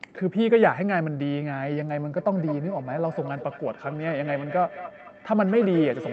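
From 2.17 s to the end, feedback echo between two devices: one device replays the other's microphone, which recaptures it, so speech returns roughly every fifth of a second, thinner, peaking about 12 dB below. Spectrograms show faded, evenly spaced copies trailing each syllable.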